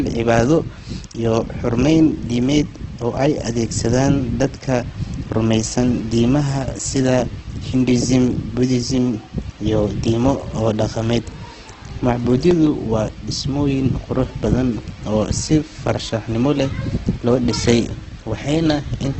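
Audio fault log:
throughout: Opus compression. The speech sounds grainy and rough, with a noisy texture over the voiced sounds. Nothing is heard above about 8.2 kHz, so the top end is dull. The cause is likely an Opus encoder in its music (CELT) mode at a low rate, around 12 kbps. It keeps each band's energy and fills starved bands with folded or noise content. That is why the sound has grain instead of the watery swirl and holes of MP3.
12.20 to 12.67 s: CD scratch ticks. Four short ticks, each about a millisecond or less, come at an even spacing of roughly one every sixth of a second. A blemish passes under the pickup once per disc revolution and destroys more data than error correction can rebuild, so the player briefly interpolates or mutes the damaged samples. The steady, rotation-locked rhythm over about half a second separates these from random clicks or digital dropouts.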